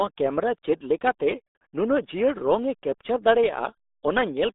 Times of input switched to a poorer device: none

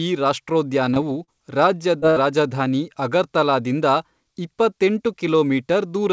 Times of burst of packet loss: 2.10-2.23

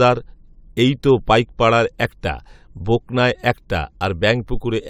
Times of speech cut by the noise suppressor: none

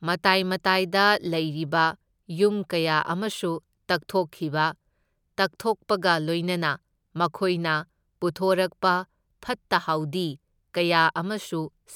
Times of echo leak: none

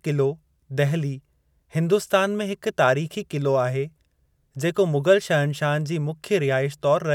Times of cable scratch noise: none

